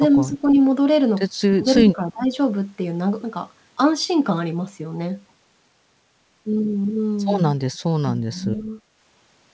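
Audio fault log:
0.13–2.32 s, speech suppressed in double talk: three dips, at 0.13–0.57 s (about 5 dB), 1.52–1.66 s (about 25 dB) and 1.86–2.32 s (about 15 dB). The level pumps down and partly cuts out, likely because the echo canceller mistook overlapping far-end talk for echo and attenuated both.
7.74 s and 8.57–8.62 s, echo leak: brief, faint delayed copies of the talker, about 40 dB and about 30 dB below the speech, trailing it by 321 ms. They are likely residual loudspeaker echo that the far-end canceller failed to remove.
7.81–8.78 s, speech suppressed in double talk: a longer stretch with gaps totalling around half a second and drops of about 25 dB. The same suppressor behaviour is likely responsible, clamping down while both sides are active. The band stops at 8 kHz, consistent with the G.722 call path.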